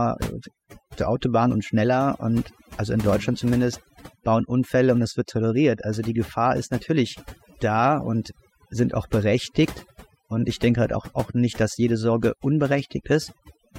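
From start to finish, the speech carries overdone noise removal. A noise reduction stage was pushed too hard on a noisy recording. It pulls individual frequency bands far down, or cuts them entirely, whenever they sit close to its noise estimate. Quieter parts of the voice fall below that line and vanish with the noise. The gaps between phrases drop to near silence, dotted with twinkling specks.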